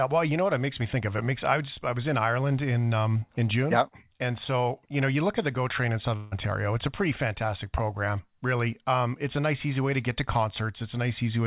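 At 6.16 s the speech gives way to a buzzy smear of its last sound that fades rather than stopping, and at about 6.35 s speech picks up again with a short stretch of it simply gone. This is most likely a long network dropout: for roughly 160 ms no audio arrived, and the receiver stretched the final fragment to cover nearly all of the gap. Through the narrowband call path, with nothing above 4 kHz, the patch sounds dull and tonal.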